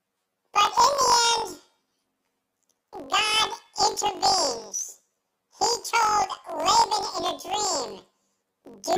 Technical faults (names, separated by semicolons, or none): planar audio read as interleaved